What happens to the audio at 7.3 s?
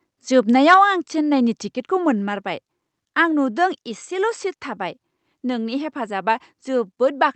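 Nothing goes wrong at 7.3 s: the speech there carries straight through the call path with no dropout, glitch or other fault.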